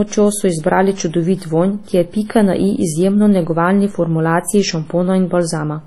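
From start to end, the speech was likely encoded first at a low bitrate, possibly around 32 kbit/s WMA, and then saved again as a high-bitrate MP3. The second pass restores nothing. Content stops at 12.9 kHz, with the first codec's artefacts intact.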